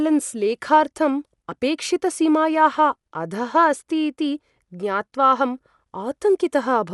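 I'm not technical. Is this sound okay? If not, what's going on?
No. From start to finish the speech sounds dull and muffled, with a rough, fluttery hiss clinging to it. This is likely Dolby Digital compression squeezed too hard: everything above 11.5 kHz is gone, and the missing detail gets filled in with noise.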